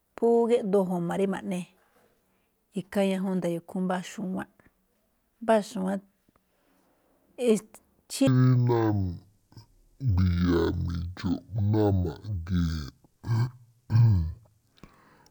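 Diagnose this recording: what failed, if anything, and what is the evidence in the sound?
At the sample-format conversion stage, interleaved stereo was read as mono from 8.27 s to the end at 15.31 s: left and right samples are played back to back as one channel. The speech therefore runs at half speed and drops a full octave.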